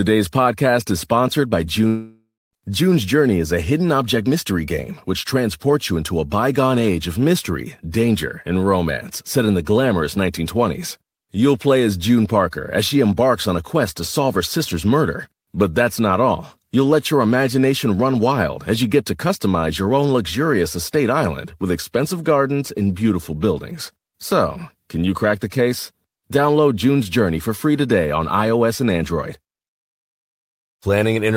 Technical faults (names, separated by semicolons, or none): long network dropout